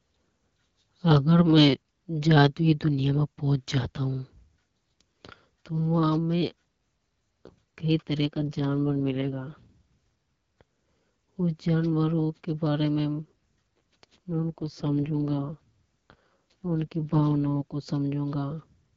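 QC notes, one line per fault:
8.26–9.77 s and 14.32–17.76 s, AMR rate drop: just after "कई तरह" and again later, the speech turns rough, raspy and synthetic, then clears. This fits the AMR-WB codec falling from 12.65 kbit/s to its 6.6 kbit/s mode and spending the freed bits on error protection. Unlike packet loss, there is no gap or dropout. Unlike a switch to narrowband, the upper band stays the same and only the texture coarsens.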